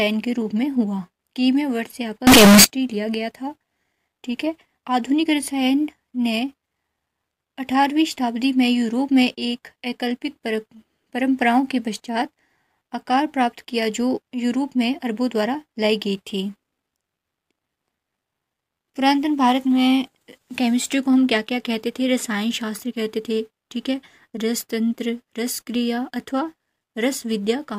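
From 2.27 to 2.64 s the audio turns abruptly into a very loud, harsh, buzzy blast, with the waveform slammed into a near-square shape at an almost fixed, high level and quiet background noise pushed up as loud as everything else. This is float read as integer: the samples were likely stored as 32-bit floating point but interpreted as 32-bit integers, so their sign and exponent bits, not their true amplitude, dictate the level.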